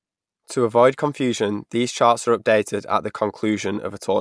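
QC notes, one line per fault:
Nothing here calls for a QC note; I couldn't pick out a single fault anywhere in this speech clip.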